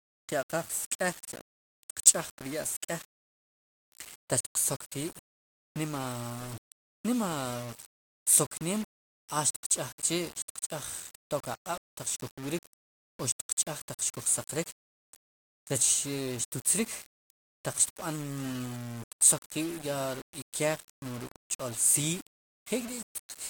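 Low bit depth without dither runs through the whole speech clip, from start to finish. It sounds like rounding to very few levels, consistent with about 7 bits, with no dither, likely the cause. The resulting error tracks the signal, so quiet passages turn grainy and gritty, sitting only about 20 dB below the speech.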